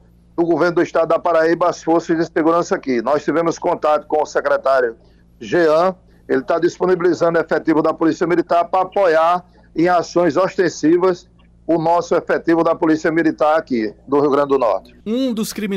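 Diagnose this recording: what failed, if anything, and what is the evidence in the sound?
A gain stage ahead of the converter, or the converter input itself, is driven past full scale for the whole recording, producing hard clipping. The overload is slight, about 2 dB, so only the loudest peaks, around a couple of percent of samples, get sliced flat. Those squared-off tops generate high harmonics, heard as brief crackle riding on the peaks rather than constant fuzz, recurring wherever the sound gets loud across the clip.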